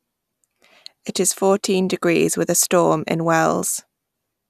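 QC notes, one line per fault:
No fault found in this speech clip.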